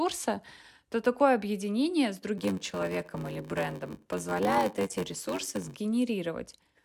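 From 2.37 s to 5.78 s, just after "то такое объединение с", the speech shows a block size mismatch (padded). Each block written is shorter than the one read, with zeros filling the remainder. This gives a 93.8 Hz buzz, which fits a 512-sample read buffer, and playback slowed to 0.861 times speed at roughly unchanged pitch.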